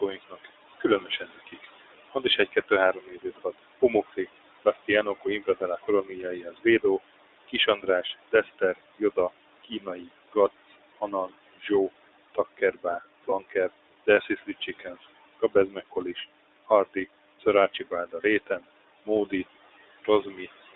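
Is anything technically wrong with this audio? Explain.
Yes, several faults run through this speech recording.

Noise suppressor artifacts are present throughout. The background, which sits about 16 dB below the speech, drops away in the pauses and swells back under the words. A suppressor is pulling down bands it judges to be steady noise, frame by frame, by up to about 21 dB.

The sound is band-limited and slightly rough and synthetic for the whole clip. It passes roughly 300 Hz to 3.7 kHz with nothing brighter. This is the iLBC codec, which codes each 20 ms frame independently. The damage is plainly audible, and the character fits its 15.2 kbps mode.

Speech is cut by the noise suppressor in several stretches. Soft consonants and word endings sound swallowed or faint between 0.13 and 6.84 s (about two seconds affected in total), 7.48 and 11.7 s (about a second), 12.35 and 19.32 s (about one and a half seconds), and briefly at 20.02 to 20.48 s. 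Parts of the speech were mistaken for noise and lowered by up to about 19 to 21 dB.

Lost iLBC frames occur at 1.50 to 1.54 s, 13.30 to 13.34 s and 18.22 to 18.26 s. Each is a 20 ms blip where the sound briefly holds as a slightly buzzy vowel. The decoder filled a missing frame by repeating the last pitch cycle with added noise, and the voice is right again almost at once.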